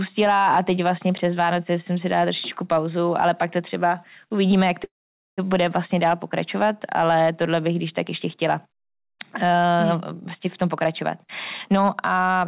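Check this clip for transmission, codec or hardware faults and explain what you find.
Two kinds of transmission fault are audible in this speech, heard through a narrowband call path with nothing above 4 kHz, which fits G.711 A-law at 64 kbps.

Call audio freeze, 4.84 to 5.40 s: after "to třeba uvidíme jak", the sound hangs as a brief fading buzz, then goes silent for about half a second before resuming at "bude vlastně dál pokračovat" with nothing lost. The likely cause is delayed packets draining the jitter buffer, so the receiver stretched the last sound and then waited, inserting a 536 ms gap.

Jitter buffer speed-up, 10.62 to 11.28 s, just after "vlastně v", and 11.72 to 12.37 s: the speech turns hurried without changing pitch, running at 113% and then 128% speed. After a backlog built up, the receiver cut repeated pitch-period slices, trimming about a tenth and then about a fifth of a second.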